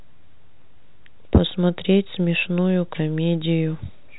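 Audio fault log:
No faults are heard in this speech clip. It has passed through G.711 telephone coding, which leaves nothing above about 3.9 kHz and at most a faint quantisation hiss that rises and falls with the speech level, which fits an A-law link at 64 kbps.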